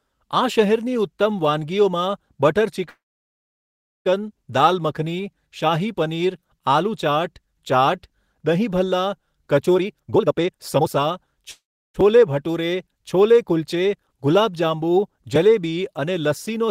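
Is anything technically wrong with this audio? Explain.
Yes. The speech has two call audio freezes and one stretch of jitter buffer speed-up.

At 2.89 s the sound stalls until 4.07 s, a gap of about 1.16 s. The last sound is carried on briefly as a fading buzz, then about 1.08 s of silence follows. A second, shorter freeze runs from 11.51 to 11.96 s, about 0.43 s, with about 0.35 s of silence. The likely cause is packets held up in transit, so the jitter buffer ran dry. When the audio resumes, it picks up where it stopped. Nothing is lost, but the delay grows each time.

From 9.75 to 11.44 s the speech runs at 154% speed. The receiver had more buffered audio than it wanted. It trimmed many tiny pitch-period slices in a row, roughly a second in total. The pitch stays the same, but the talking sounds rushed.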